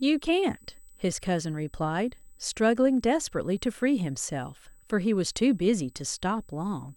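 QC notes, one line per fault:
Throughout: USB whine. A thin, fixed-pitch tone sits at 8 kHz under the speech for the whole clip, well down in level at roughly 35 dB below the signal. It comes from the USB bus drawing current in 125 microsecond microframes, and that periodic load leaks through the power or ground into the audio path. On a spectrogram it is a sharp, unbroken horizontal line at 8 kHz. The waveform shows no visible trace at this level.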